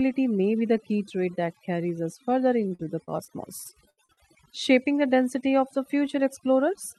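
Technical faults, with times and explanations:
Throughout: overdone noise removal. The denoiser is pushed way too hard, so any frequency band sitting close to its noise estimate gets pulled right down or switched off, and the softer parts of the speech get swallowed along with the noise. That's why the pauses drop to near silence with little twinkling specks.
2.63 to 4.20 s: repeated packet loss (robotic sound), starting right after "that carries us further". Over that stretch there are about nine short holes, the longest around 73 ms, and roughly a fifth of the span is patched rather than real. Each gap gets filled by stretching the last bit of sound, then the next gap hits before things recover, so the speech turns choppy, with chunks missing. The call codec's top end, around 12 kHz, carries on through this stretch.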